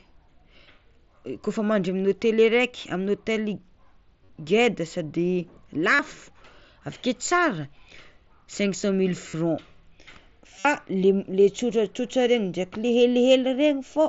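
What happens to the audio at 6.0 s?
Right around there, from 5.95 to 5.99 s, there's concealed Bluetooth headset packet loss. About 40 ms of audio went missing, which fits a run of five lost frames. The receiver patched it by looping the last bit of waveform, so you hear a short buzzy held tone and a slight warble when the real signal comes back.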